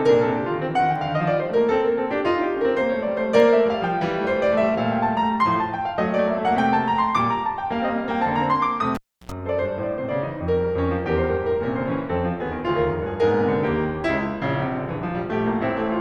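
At 8.95 s the music cuts out with a pop as a live cable is pulled and plugged in. About 320 ms of near silence follows, then roughly 77 ms of 60 Hz mains buzz while only the tip makes contact, before a second pop at 9.32 s.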